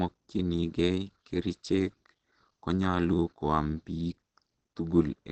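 Opus compression runs through the whole of this speech clip: nothing remains above about 8.4 kHz, and the sound is plainly muffled and hoarse. That is likely the codec's speech (SILK) mode at wideband, which fits a low rate near 16 kbps squeezing the signal.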